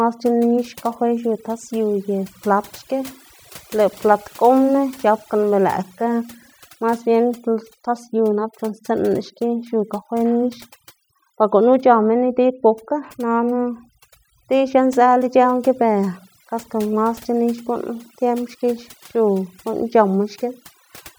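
A speech recording with overdone noise removal throughout: the background drops and breaks up into twinkling, warbling specks. Noise reduction set too strong is cutting frequency bands that sit close to its noise estimate, taking the quieter parts of the voice away with the noise.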